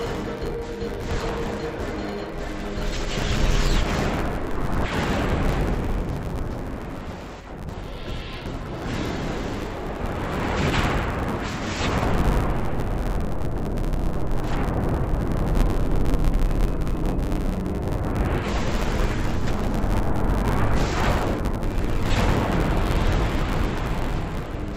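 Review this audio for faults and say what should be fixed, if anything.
Throughout, the sound is dull and robotic with a buzz near 94 Hz. This is interleaved audio read as planar, in 10.67 ms blocks consistent with 512-sample buffers. To prevent it, match the reader's channel layout to the interleaved stream format.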